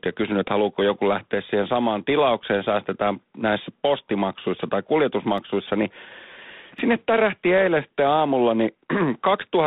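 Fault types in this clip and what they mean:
G.726 ADPCM: The whole clip passes through a G.726 coder. It sends each sample as a small difference from a running prediction. Here it runs at 24 kbit/s, so each sample gets very few bits. The damage is plainly audible. A rasping hiss rides on the speech and rises and falls with its level. The line band spans about 150 Hz to 3.7 kHz. Nothing above 3.8 kHz comes through.
block of digital silence: Twice, a run of samples drops to silence. Sound stops and restarts with no fade. The first hole is at 5.38 s, lasting 0.93 ms, right after "säästetään näissä postimaksuissa tai". The second is at 6.79 s, lasting 1.45 ms, just before "sinne tärähti eilen sitten". That second gap fits a 64-sample block. Both are too short to hear as gaps. Each lands as a tick or dip.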